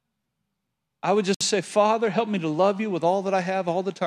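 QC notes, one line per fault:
1.34–1.41 s gap at a join of encoded pieces: separately encoded segments were spliced untrimmed, so encoder delay and end padding leave a 63 ms silence after "I would," with smeared edges.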